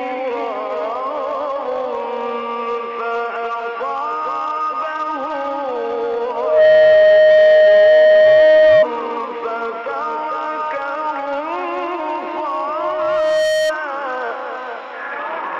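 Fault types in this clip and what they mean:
Loudspeaker feedback squeal: the microphone re-amplifies its own loudspeaker until the loop runs away at 620 Hz, a tone swelling over the sound twice.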